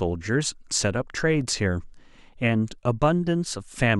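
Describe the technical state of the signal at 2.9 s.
At 2.9 s the speech signal is intact, with no audible technical fault at that point.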